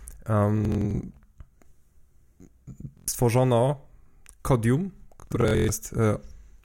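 Bluetooth stutter hits the speech at 0.65–1.00 s, 2.97–3.08 s and 5.20–5.73 s. Late or lost packets made the receiver replay its last slice of roughly 23 ms, producing a machine-gun buzz (longest run 116 ms, in the last burst) rather than a plain dropout's silent gap.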